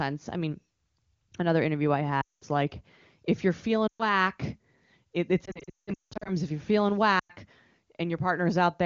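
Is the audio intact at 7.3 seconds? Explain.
No. Lost AMR speech frames run from 7.19 to 7.32 s, about 100 ms, which fits five 20 ms frames failing their checksum. The wideband decoder repeats its last good pitch and vocal tract settings at falling gain, so the sound smears briefly and fades quickly before recovering.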